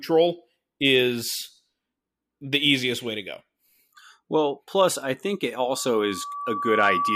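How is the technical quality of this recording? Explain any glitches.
The recording breaks down near the end with loudspeaker feedback squeal. From 5.72 s, right after "plus I think it", to 7.16 s, the microphone is picking up the loudspeaker it feeds, and at about 1.2 kHz the loop gain exceeds one. That frequency reinforces itself on each trip around the loop, so a pure tone swells over roughly a second until it sits at about the same level as the speech, a steady piercing squeal that continues to the end of the clip.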